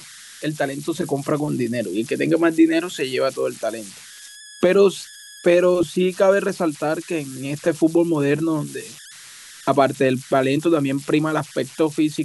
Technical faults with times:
0.00-12.24 converter idle tones

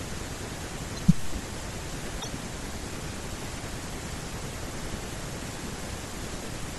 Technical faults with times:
0.00-6.79 MP3 compression
2.20-2.27 corrupt frame decoded

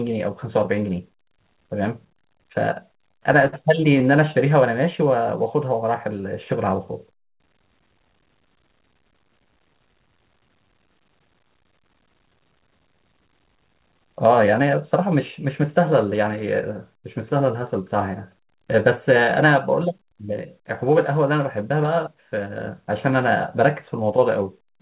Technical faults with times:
2.86-4.07 repeated stalls (stutter)
19.45-20.29 jitter buffer speed-up
22.69-23.56 jitter buffer speed-up

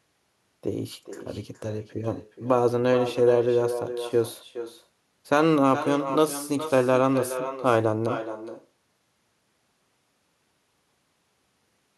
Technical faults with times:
0.00-11.97 echo with no canceller

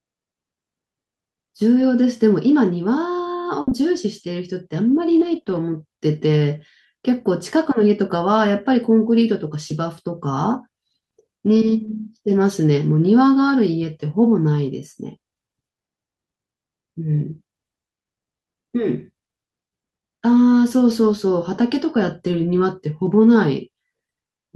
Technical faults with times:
1.79-5.57 scattered short gaps
9.69 lost packet rebuilt from error correction
11.55-11.89 lost packet rebuilt from error correction
18.99 lost packet rebuilt from error correction
23.05 lost packet rebuilt from error correction

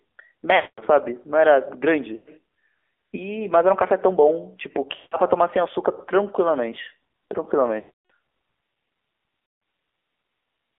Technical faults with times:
0.00-10.79 AMR narrowband mobile codec
0.56-0.82 lost AMR speech frames
2.16-2.29 lost AMR speech frames
4.96-5.16 lost AMR speech frames
7.80-8.11 lost AMR speech frames
9.46-9.62 lost AMR speech frames

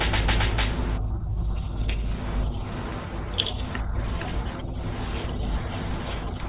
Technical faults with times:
none

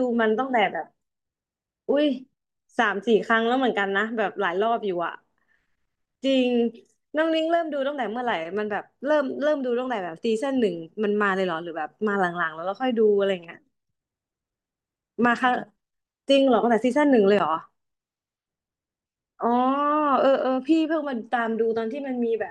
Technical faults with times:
none

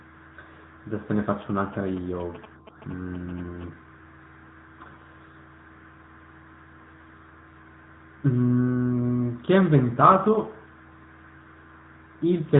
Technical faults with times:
0.00-12.60 AMR narrowband mobile codec

